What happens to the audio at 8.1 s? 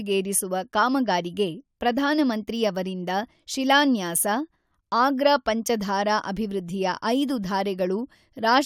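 Nothing goes wrong at 8.1 s: the speech carries on cleanly through that moment, with no dropout, click, distortion or other fault.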